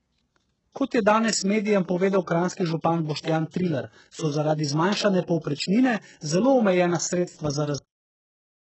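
From the start, the speech has a band-limited, smeared quality, with nothing above 8 kHz. On a spectrogram the energy stops at a flat horizontal ceiling at 8 kHz for the whole clip, with blank space above it. This is low-bitrate audio saved at a high bitrate: the sound points to a very low-bitrate first encode, likely re-encoded afterwards as a large MP3. The second pass adds size but cannot restore the detail and high band that the first codec threw away.

At 7.78 s, right after "povprečnine zelo omejena sredstva", the audio has a cut-off end. The sound halts mid-utterance with no natural decay, as if the final buffers were never written. The waveform shows the signal ending abruptly and flatlining into silence, and the spectrogram goes fully blank from 7.78 s to the end of the clip.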